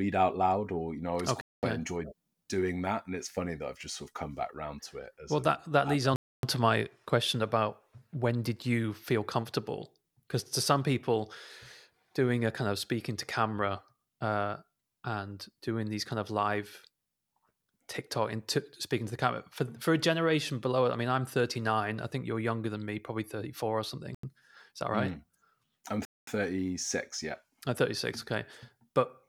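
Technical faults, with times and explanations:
1.41–1.63 s, 6.16–6.43 s, 24.15–24.23 s and 26.05–26.27 s, Bluetooth stall: speech drops to dead silence for 218, 272, 88 and 222 ms. That's likely the headphone buffer running dry while interference delayed packets.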